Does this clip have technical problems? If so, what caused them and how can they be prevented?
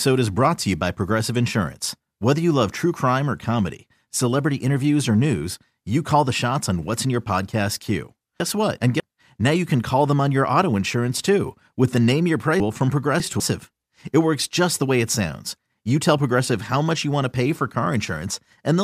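Yes, there are chunks out of order at 8.4–9.0 s and 12.6–13.4 s. A roughly 200 ms piece of speech plays after the two or three pieces that should follow it, so each spot sounds jumbled. Reordering by sequence number in the receive buffer prevents it.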